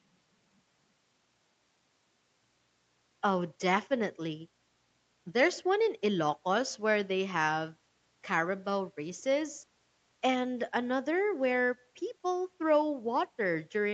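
Nothing goes wrong anywhere in this speech, and the lack of anything above 8 kHz is just what you'd expect from ordinary call processing and a call codec.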